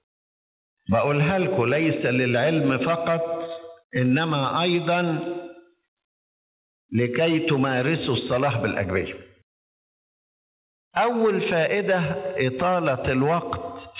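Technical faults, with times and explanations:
Throughout, gain pumping: the gain swells in each gap and ducks by around 10 dB under every loud sound, so the level breathes and sounds squashed. The likely cause is microphone gain set far too high, with a fast limiter clamping each peak.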